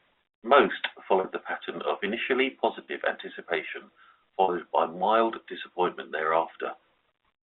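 At 1.20 s, just before "the pattern of initially", at 2.84 s right after it, and at 4.44 s ahead of "by mild disappointment", there's packet loss with pitch repetition: roughly 40 ms gaps, consistent with two lost 20 ms packets, get bridged by a repeated pitch period, leaving a brief buzzy hold over the narrowband telephone sound.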